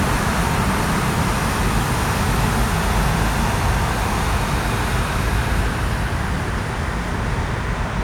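From start to finish there's a doubled audio track: a second, equally loud copy trails about 0.7 s behind, dry and full-band, likely from a slower capture path.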